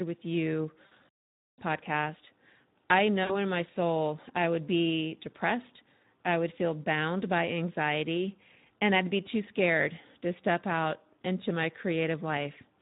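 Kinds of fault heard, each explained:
Speex codec: Throughout the speech, a low-rate CELP coder starves the excitation of bits, leaving the voice plainly hoarse and noisy. The coarseness fits a setting around 11 kbps, where fine harmonic detail is replaced by an approximated, rough-textured signal.
VoIP packet loss concealed by the speech codec: At 0.85–0.94 s, 3.24–3.36 s and 6.16 s, the decoder bridges missing audio by extending its last pitch and spectral envelope at falling gain. Each gap sounds like a brief buzzy or noisy smear that fades, and the voice stays weakened shortly after.
Playback stall: From 1.09 to 1.58 s the output drops to silence for about half a second, cutting the speech off mid-flow before it resumes. This points to the player likely running dry of buffered data or being blocked, rather than to a codec effect.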